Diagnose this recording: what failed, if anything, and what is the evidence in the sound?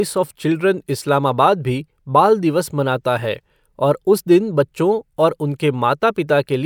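Nothing in this recording sounds like a failure to me: the speech comes through steady and intact, with nothing I can hear going wrong at any stage between capture and playback.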